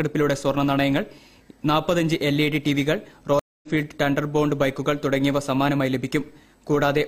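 At 3.39 s the sound drops out completely for about 235 ms, and when it returns at 3.68 s it picks up roughly a fifth of a second further on, so a short stretch is simply missing rather than delayed. This is a stream reconnect: the connection broke, playback went silent, and the player reconnected and started a new decoder partway through a live stream, skipping ahead instead of replaying what was lost.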